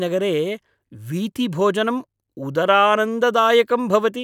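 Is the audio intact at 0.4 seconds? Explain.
Yes, at 0.4 seconds the speech plays through cleanly, with no dropout, click, distortion or other fault at that point.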